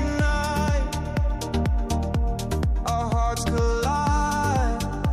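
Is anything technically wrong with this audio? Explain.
Yes. At 3.45 s, compressed frames are skipped. About two frames never reach the output, so the audio jumps ahead by roughly 30 ms. It sounds like a sudden skip where a short stretch of audio is missing.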